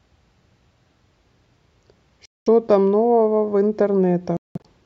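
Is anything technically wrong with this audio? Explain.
Yes. The speech drops out twice. From 2.25 to 2.48 s, about 210 ms of sound is missing. From 4.37 to 4.66 s, about 230 ms goes missing in broken gaps over roughly 280 ms, with the longest silent stretch about 190 ms. Each hole has hard edges or a fade of a few milliseconds. The speech comes back further along, as if it had kept playing. This is likely a Bluetooth dropout, where audio packets arrive too late and are discarded.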